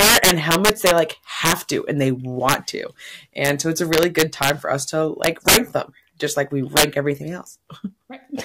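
Integer overflow cracks through the speech at 0.00–0.98 s, 1.45–1.53 s just before "to and they", 2.49–2.54 s just after it, 3.45–3.49 s, 3.93–4.50 s, 5.24–5.57 s, and 6.77–6.84 s after "them just like we". Peaks driven about 1 to 11 dB past full scale wrap to the opposite sign instead of limiting. On the waveform, crests jump instantly from top to bottom rail. On a spectrogram, broadband vertical streaks appear, and they sound harsher than clipping.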